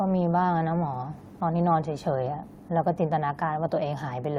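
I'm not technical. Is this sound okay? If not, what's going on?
Yes, the recording is technically sound, with nothing in the signal that points to a problem with how it was captured or delivered.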